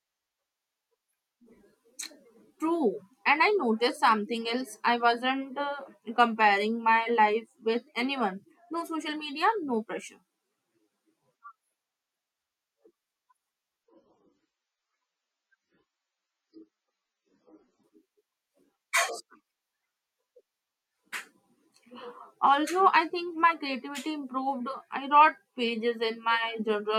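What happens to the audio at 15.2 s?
At that moment the adaptive stream has dropped to a lower bitrate, most likely because the connection slowed, and it stays on that lower-quality version from 13.84 s to 17.84 s. The speech switches abruptly with no gap: everything above 7.4 kHz vanishes, the treble turns dull, and codec artefacts thicken, which points to a fall from roughly 128 kbit/s MP3 to around 16 kbit/s.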